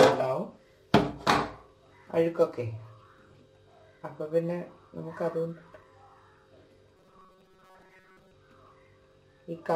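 From 6.97 to 8.35 s the audio becomes robotic sound from repeated short buffers, a rigid metallic buzz near 188 Hz. The likely cause is starved playback looping a roughly 5 ms chunk for most of that span. On a spectrogram it shows as evenly spaced harmonic lines. The waveform shows identical short cycles.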